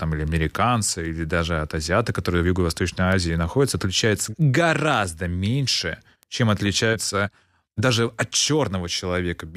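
From 0.28 s to 9.33 s the speech carries word clock ticks: around forty sharp ticks, roughly one every third of a second, some louder than others. The receiving device was not locked to the sender's clock, and the two drift apart by something like 70 ppm, so each time they slip, one sample is dropped or repeated. The near-even spacing is what separates these ticks from random clicks or packet dropouts, which come at irregular times.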